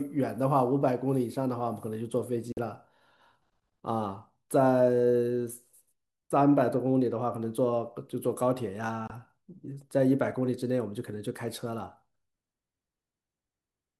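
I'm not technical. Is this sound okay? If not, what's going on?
No, the speech briefly cuts out twice, at 2.52 to 2.58 s and around 9.07 to 9.10 s. That's a digital broadcast dropout: the receiver lost a few bits of signal and went silent until it recovered.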